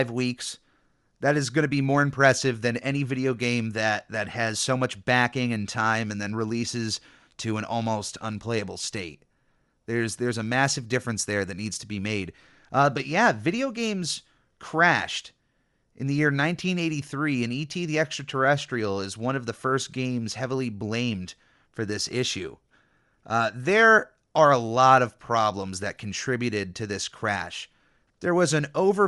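A speech clip with plainly audible Bluetooth LC3 compression running the whole way through: the upper frequencies have a grainy, breathy, noise-filled edge, and the artefacts fit 7.5 ms frames at around 48 kbps, likely from an LE Audio link.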